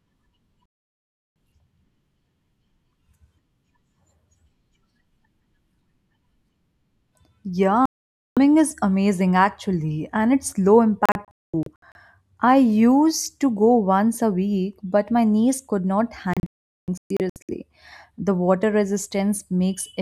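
Digital broadcast dropout hits this speech four times: the receiver lost the signal or rejected corrupted frames and muted until clean ones returned. At 0.75 to 0.78 s the sound cuts out briefly, but about 704 ms of programme is gone. At 7.86 to 8.37 s it mutes for about 512 ms. From 11.06 to 11.96 s it breaks into several short holes totalling 448 ms, and from 16.34 to 17.49 s into holes totalling 768 ms.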